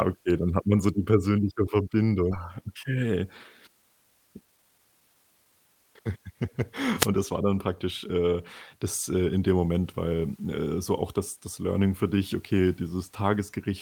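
At 2.31 s the speech skips ahead. About a second of audio was dropped, and the two sides join almost directly with no gap.

Jitter buffer speed-up follows, from 2.61 to 3.22 s at 110% speed, then from 3.68 to 5.76 s at 118%. Short pitch-period pieces are cut repeatedly. Speech sounds hurried at unchanged pitch.

From 6.96 to 7.09 s, just before "das war dann praktisch", a wireless microphone noise hit occurs. A radio fade raises receiver noise into a brief swish of static.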